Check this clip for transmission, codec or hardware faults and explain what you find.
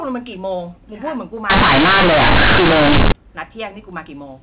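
One transmission fault is present, set against a telephone path that is band-limited to 4 kHz as expected.

From 1.50 to 3.12 s, companded audio is read as linear. Mu-law bytes play as raw 8-bit samples without expansion, so every sign change swings across half the range. The speech becomes harsh, loud buzz with heavy noise in pauses, unlike clipping, where quiet passages stay quiet.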